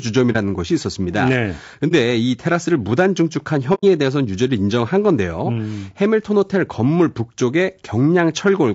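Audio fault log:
throughout: low-delay AAC compression, a rough, grainy speech texture with noise between the harmonics, likely from AAC-ELD at a rate that fits around 32 kbps; the spectrogram shows smeared harmonic lines and a thin, synthetic-looking top band.
0.32–0.36 s, 1.88–1.93 s, 3.74–3.84 s: AAC frame loss with muting. The decoder zeroed the missing spectrum, leaving soft-edged dropouts of roughly 30, 30 and 90 ms; the waveform tapers down and back, and the spectrogram shows blank vertical strips.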